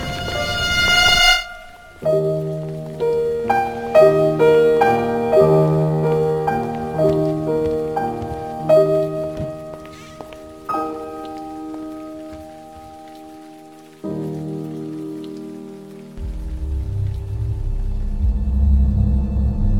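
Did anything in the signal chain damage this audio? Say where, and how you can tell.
Yes, crude rate conversion at the sample-format stage throughout: nearest-sample repetition, fitting a 44.1 kHz to 48 kHz change, adds inharmonic fizz roughly 30 dB below the sound, following loud, high passages.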